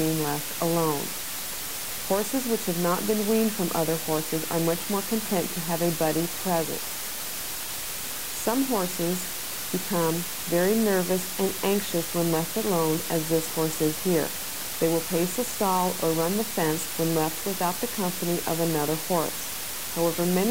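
From start to finish, low bit depth with dither: about 4 bits with dither before rounding leaves a steady, even hiss nearly as loud as the sound, without distortion.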